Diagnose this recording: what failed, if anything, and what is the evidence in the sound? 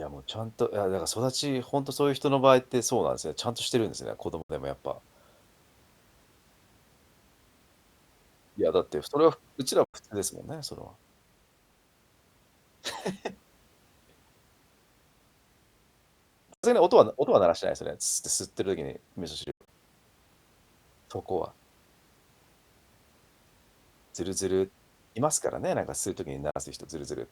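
The speech breaks into silence five times: at 4.42 s for 70 ms, 9.84 s and 16.54 s for 93 ms each, 19.44 to 19.68 s as 139 ms of gaps scattered over 232 ms, and 26.50 s for 46 ms. Each hole has abrupt edges or a fade of a few milliseconds and silence on the waveform, a clean vertical blank band on the spectrogram, and the speech resumes further on, as if it kept playing. This is likely a Bluetooth dropout at the playback link, with late packets discarded; the gap lengths suggest two to six packets lost.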